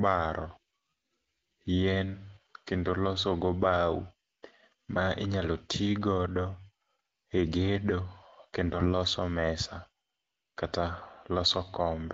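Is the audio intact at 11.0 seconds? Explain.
No. From 10.97 to 11.06 s, AMR bit errors flip a few percent of weakly protected frame bits, misplacing excitation pulses, so the speech turns briefly hoarse, scratchy and gargly.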